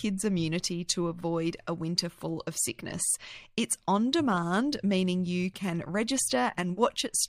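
No technical faults can be heard anywhere in the speech, with the signal holding steady and continuous across the whole recording.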